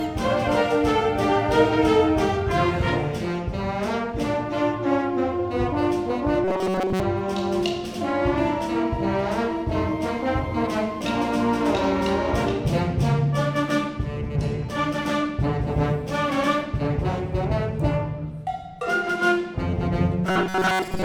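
From 6.44 to 7.00 s and again from 20.27 s to the end, a robotic sound from repeated short buffers appears: a rigid 188 Hz buzz, likely from a block of about 5.3 ms being replayed for most of the time while new audio is skipped. Spectrograms show evenly spaced 188 Hz harmonic stripes, and waveforms show identical repeating cycles.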